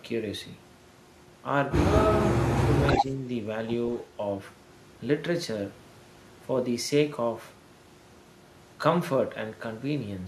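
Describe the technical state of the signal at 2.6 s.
At 2.6 s the speech is caught in a stretch of speech suppressed in double talk, running from 2.4 to 2.83 s. The level dips in pieces, adding up to around 150 ms, and falls by roughly 15 dB at its deepest. The talker sounds briefly pushed down, then recovers. The likely cause is an echo canceller that heard both ends at once, could not tell the local voice from the far-end echo, and attenuated both.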